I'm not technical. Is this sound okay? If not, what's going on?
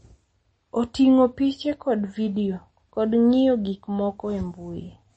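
No. From start to finish the speech carries the damage typical of heavy MP3 compression, likely from being saved at a low quality setting. The encoder has cut away all the treble above about 8.3 kHz, so the sound is dull, and s sounds lose their crispness. With too little data to work with, it also drops quieter detail that flickers in and out moment to moment, which leaves a watery, swirly texture over the voice.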